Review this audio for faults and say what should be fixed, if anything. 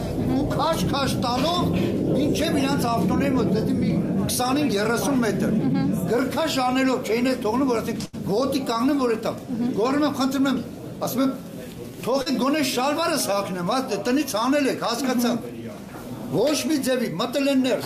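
A burst of packet loss hits at 8.05 to 8.15 s. About 80 ms of audio never arrived. The receiver stretched the last sound for roughly 77 ms and faded it. You hear a held buzz or fading hiss. Then the sound jumps ahead.

A short concealed packet loss follows at 12.22 to 12.28 s. About 40 ms is missing. The decoder filled it by extending the preceding sound, then blended back. It comes across as a brief smear or wobble.

To prevent both, add forward error correction and a slightly deeper jitter buffer on the network path.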